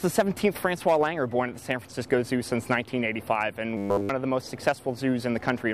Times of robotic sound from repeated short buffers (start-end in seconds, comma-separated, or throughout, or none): 3.77-4.09